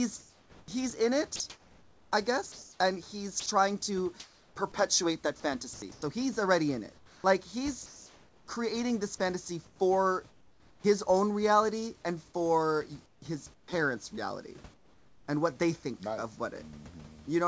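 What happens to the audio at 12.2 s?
At 12.2 s you're hearing channel delay comb filtering, present throughout: one channel lags by roughly 0.2 ms, so mono summing carves notches from around 3 kHz, sounding hollow.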